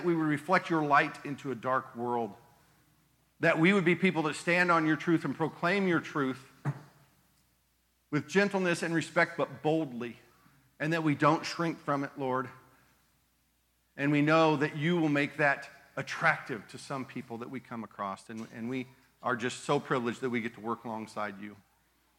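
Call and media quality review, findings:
No call or media quality faults found in this clip.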